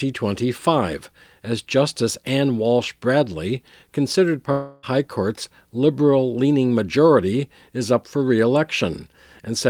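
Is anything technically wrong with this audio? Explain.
Yes. From 4.51 to 4.85 s the speech breaks into a fading buzzy smear before resuming with about 0.32 s missing, likely a long network dropout. On a spectrogram, harmonics blur into a decaying smear with no gap, then the speech resumes abruptly.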